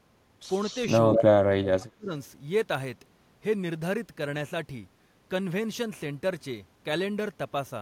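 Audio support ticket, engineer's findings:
Echo leak, 0.62–0.84 s and 1.12–1.22 s: delayed copy of the speech about 0.2 s behind, faint in the first spot, roughly as loud as the talker in the second. Likely the far end's echo canceller letting loudspeaker pickup back through.

Speech suppressed in double talk, 1.47–2.12 s: the talker's speech is turned down, deep cuts of up to about 30 dB, about half a second affected in total. Likely the echo canceller mistaking the talker for echo while both sides spoke, then ducking everything.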